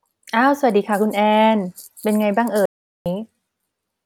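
At 2.66 s the speech cuts out mid-flow, and an audio dropout to silence lasts until 3.06 s. The gap is silent with no room tone. About 0.4 s of speech is gone. The likely cause is lost input, written as silence.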